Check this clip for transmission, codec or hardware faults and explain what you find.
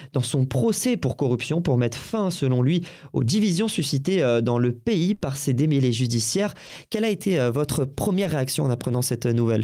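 Three network faults are audible. Around 5.13 to 5.23 s the last sound is held and fades away, a burst of packet loss. About 80 ms never arrived, so the receiver stretched and faded the last sound before resuming. At 6.67 to 6.71 s and 8.23 to 8.27 s brief smears or wobbles mark short concealed packet loss, with roughly 20 ms of missing audio each time patched by extrapolation.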